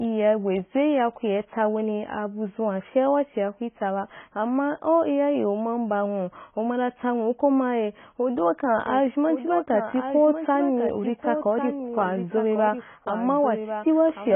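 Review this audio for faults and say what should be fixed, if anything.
Heavy, likely AAC compression affects the whole clip. Nothing survives above 3.8 kHz, so the speech sounds dull and smeared, with fizzy, warbling sibilants. That fits a bitrate near 16 kbps. A spectrogram shows a hard ceiling at 3.8 kHz with patchy holes below. Encoding at a higher bitrate would prevent this.

From 8.87 s to the end there is a doubled audio track. A full-band copy of the speech follows about one second behind, roughly 10 dB quieter, with no added room colour. It likely comes from a second capture path. On the waveform, a fainter shifted duplicate starts abruptly at 8.87 s. Recording through a single path only would prevent this.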